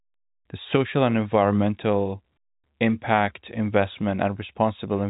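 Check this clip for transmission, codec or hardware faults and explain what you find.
Nothing here points to a fault: the speech comes through intact with the narrow, sub-4 kHz sound of ordinary G.711 telephone coding, and the faint quantisation noise that rides under the signal is just part of how that telephone format works.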